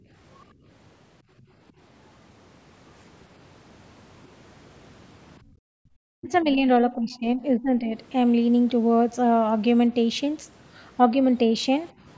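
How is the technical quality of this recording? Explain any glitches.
The recording is a call capture with echo-canceller trouble: the room sound gets gated, faint traces of a second voice leak through, and the talker is pulled down during overlap. The band stops at 8 kHz, which matches call microphone processing.

Background gated by the echo canceller: at 0.0–0.1 s and 0.54–0.66 s the room tone drops by about 14 dB, and at 5.41–5.9 s by about 40 dB. The canceller clamps the microphone while the loudspeaker plays. Unlike a network dropout, the ambience dips and returns when the canceller lets go.

Other side's voice leaking through: faint foreign speech appears at 1.38–1.72 s and 7.14–7.19 s, about 35 dB below the talker, and at 6.22–6.34 s, about 25 dB below. These are likely loudspeaker residue the canceller missed. It comes through in scraps, unlike steady background talk in the room.

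Speech suppressed in double talk: between 6.18 and 7.91 s the talker's level sags by roughly 15 dB, for about a second in total, as the other side speaks. The likely cause is the canceller confusing the talker with echo and ducking both. Unlike gating, this affects the voice itself, in pieces, tied to the overlap.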